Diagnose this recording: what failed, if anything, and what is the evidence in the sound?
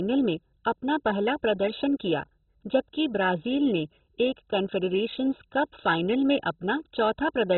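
The codec stage failed, likely through MP2 compression at a very low rate, around 16 kbps. Throughout the speech nothing remains above 4.1 kHz, leaving it dull, with heavy gurgling, granular distortion as starved upper sub-bands drop out and the remaining bands are coarsely quantised.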